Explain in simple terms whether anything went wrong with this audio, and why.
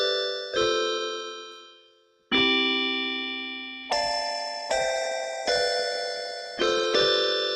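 A few things went wrong here. Throughout the clip, a noise suppressor applied to music or sounds was left switched on. It's built for speech, so it treats steady parts and lingering tails as noise and keeps nudging them down. The level gently pumps and thins rather than staying even.

Between 1.36 and 2.31 s, you get the worst of it: a sound cut by the noise suppressor. For about a second, the suppressor decided this stretch was noise and pulled it down hard, so it suddenly sinks well below everything around it.

From 3.84 s to the end, there's a call bitrate drop. The connection told the encoder to squeeze the audio into far less data, and for the last three seconds or so it stays at its lowest. It sounds rougher and duller, with the crisp top end gone.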